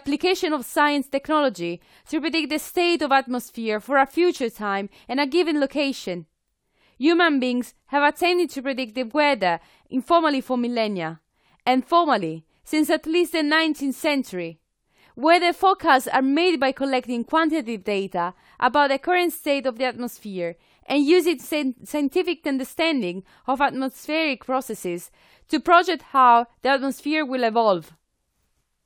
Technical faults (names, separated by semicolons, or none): none